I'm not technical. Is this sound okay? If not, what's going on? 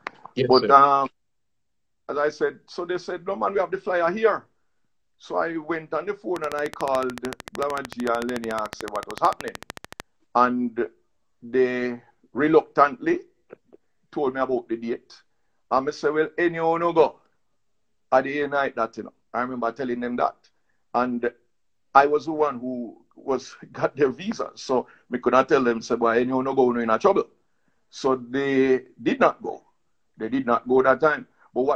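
No. From 6.36 to 10.01 seconds there is a train of clicks. About fifty sharp ticks arrive at a steady 13.5 per second, popping over the sound and the gaps alike. Electrical interference from nearby equipment is a likely cause.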